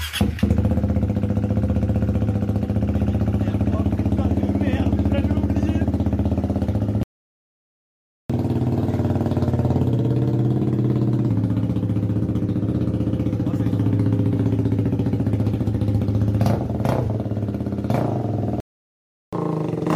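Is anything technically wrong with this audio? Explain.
Yes. Playback stalls twice, and each stall is followed by a stretch of catch-up at higher speed.

Playback stall, 7.03 to 8.30 s and 18.60 to 19.33 s: the output goes silent mid-flow for about 1.27 s and then about 0.72 s before the sound resumes. The likely cause is the player starving for data or having its output thread blocked, so nothing reached the output until it recovered. Both gaps are abrupt dropouts.

Catch-up at higher speed, 8.30 to 11.30 s and 19.33 s to the end: after each stall the player resamples its backlog to regain lost time. The first stretch runs at 1.15 times normal speed for 3 s, raising pitch by about two semitones before settling back. The second runs at 1.5 times speed, roughly seven semitones sharp, a lift that continues to the end of the clip.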